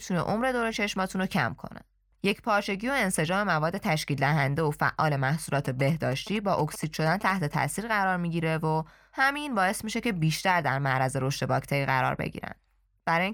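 From 5.65 s to 7.55 s the speech picks up GSM signalling bursts: a galloping dit-dit-dit of ticks and short buzzes at about 217 Hz, sitting roughly 15 dB below the speech. A nearby 2G phone is transmitting short groups of radio bursts, as it does when signalling to the network, and the audio circuitry rectifies that RF into the audible pulse train, with the burst repetition rate setting the buzz pitch.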